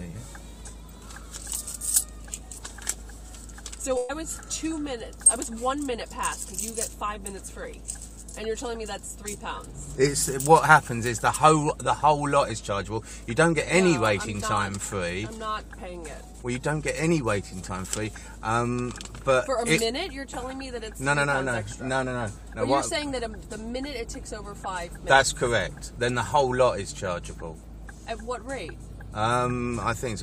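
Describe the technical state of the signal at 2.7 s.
At 2.7 s the signal is intact, with no audible technical fault at that moment.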